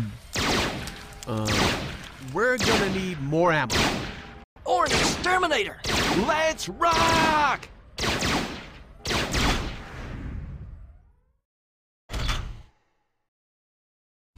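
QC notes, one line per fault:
4.44–4.56 s, playback stall: the sound cuts out mid-flow for about 120 ms, a clear hole rather than a soft dip, and then carries on from where it stopped. A gap like this is likely the player running dry of buffered data or having its output thread held up, so nothing reaches the output until it recovers, leaving a short silence that breaks the continuity of the audio.
4.56–5.76 s, catch-up at higher speed: straight after the gap the audio runs fast, at 1.1 times normal speed, with pitch lifted by about a semitone and a half, for 1.2 s before settling back. The player is resampling its backlog to win back the lost time, so speed and pitch rise together. That produces the brief, slightly chipmunk-like rush and then the audible drop back to normal pitch.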